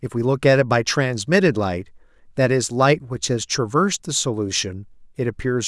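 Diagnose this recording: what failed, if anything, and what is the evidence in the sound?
Nothing failed: no stage in the chain leaves an audible mark anywhere in this speech recording.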